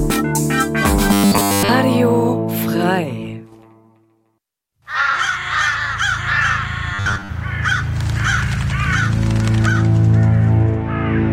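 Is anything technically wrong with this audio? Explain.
Yes. Robotic sound from repeated short buffers occurs from 1.13 to 1.69 s and 6.94 to 7.30 s. The sound becomes a rigid 100 Hz buzz. Likely cause: fresh audio arriving too slowly, so a 10 ms slice repeats, entirely in the first span, mostly in the second.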